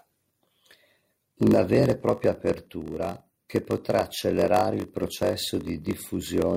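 Throughout the speech, a block size mismatch (padded) is present. One stage writes blocks shorter than the next stage reads, so each read block ends in a short run of zeros. These regular gaps produce a steady buzz at about 46.9 Hz, which fits a 1024-sample read block at 48 kHz. The inserted silence stretches playback to 0.938 times normal speed, pointing to written blocks of roughly 960 samples, while the timbre stays.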